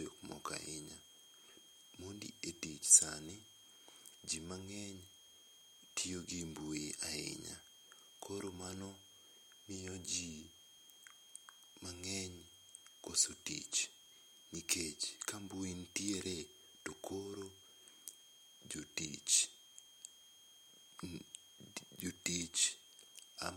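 A switching supply whistle runs under the speech for the whole clip. It is a high, thin tone that wanders between about 3.20 and 3.25 kHz and sits roughly 20 dB below the speech. The source is a switching power supply either cycling in an audible burst mode or beating against another supply.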